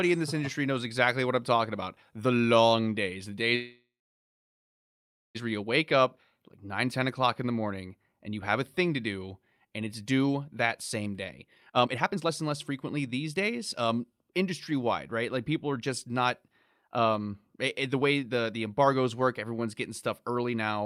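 A call audio freeze runs from 3.55 to 5.37 s after "long days the": a brief fading buzz or hiss, then about 1.46 s of silence, likely from delayed packets draining the jitter buffer. The audio resumes intact at "where you wake".

A jitter buffer speed-up from 10.99 to 14.50 s plays at 118% and trims roughly 0.7 s. A second one from 15.73 to 20.82 s plays at 107% and trims about 0.4 s. Both are hurried at unchanged pitch.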